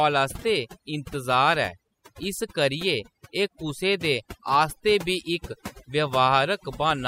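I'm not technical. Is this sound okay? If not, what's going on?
No. Overdone noise removal runs through the whole recording. A cleanup tool set far too strong cut away background noise along with the quieter parts of speech, leaving a background that drops away and breaks into twinkling, warbling specks.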